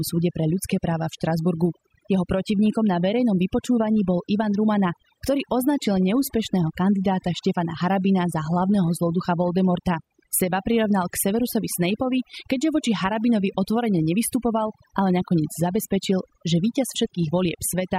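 From start to finish the speech shows overdone noise removal. A noise reduction stage set too aggressively has pulled individual frequency bands down or out entirely wherever they sat close to its noise estimate, and the quieter components of the voice were removed along with the noise. Between phrases the background drops and breaks up into twinkling, chirpy specks.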